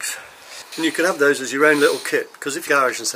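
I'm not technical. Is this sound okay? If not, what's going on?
No, there are two quick glitches, a short chirp or blip at about 0.72 s and another at 2.67 s. That's damaged data in a compressed stream: a bit of the file got scrambled, so the player stumbled briefly before picking the sound back up.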